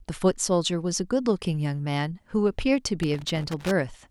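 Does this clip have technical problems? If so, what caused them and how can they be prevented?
Yes. From 3.03 to 3.71 s the speech breaks into an irregular burst of scratchy crackle. This is loose connector crackle: a worn or dirty contact was making and breaking as it moved, chopping the signal. Clean and reseat connectors, replace worn cables, and secure them against movement.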